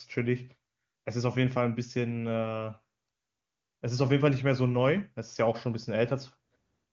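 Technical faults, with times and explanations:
No technical faults are present in this clip, so there are no times or explanations to give.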